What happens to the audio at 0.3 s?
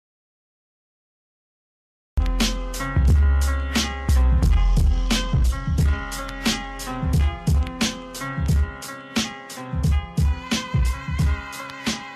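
At 0.3 s the audio is in a dropout to silence, already under way at the start and lasting until 2.18 s. Input was likely lost while zeros were written, leaving dead silence with no room tone: a flat waveform line and an empty spectrogram.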